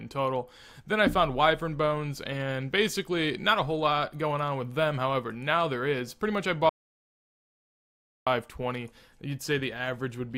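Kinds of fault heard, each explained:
Audio dropout to silence: the sound cuts off abruptly at 6.69 s and returns at 8.27 s, leaving about 1.6 s of silence with no room tone, likely from a lost input link while recording continued. The waveform shows a flat line, and the spectrogram shows a fully black gap.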